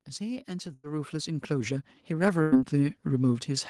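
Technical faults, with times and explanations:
0.17 to 2.68 s, automatic gain rising: the gain control judged the incoming speech too quiet and kept raising its gain over roughly two and a half seconds, by about 11 dB in total. Because the control scales the whole signal, the speech and the background noise swell together, so the clip grows steadily louder instead of holding a steady level.
0.73 to 0.95 s and 2.42 to 2.57 s, burst of packet loss: each time, a run of packets failed to arrive in time to be played. The receiver bridged each gap by stretching the last sound it had for about 100 ms while fading it down, so a voiced sound turns into a held buzz and other sounds into a dying hiss. Playback then picks up further along, with about 60 ms of the speech skipped.
1.52 to 1.82 s, jitter buffer speed-up: the receive buffer had built up more audio than it aims to hold, so the receiver cut out short, pitch-period-sized slices again and again to reduce the delay, removing about 50 ms in all. 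The speech runs at about 114% speed with its pitch unchanged, so this stretch sounds hurried.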